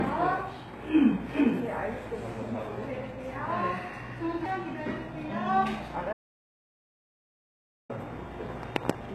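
A recording of everyday sound with plainly audible coding damage throughout. The treble sounds synthetic and gritty, with nothing above 12.3 kHz. This likely comes from HE-AAC compression. Its band replication rebuilds the top from copied lower bands, which fits a low bitrate near 16 kbps. At 6.13 s the sound cuts to total silence, with no background left. It returns at 7.90 s, so about 1.76 s is lost. This audio dropout to silence likely reflects a lost input, with silence written in its place.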